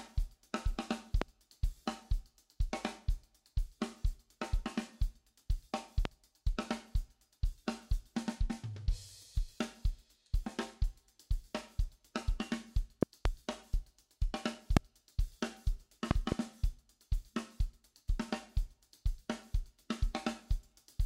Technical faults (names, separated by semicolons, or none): loud pop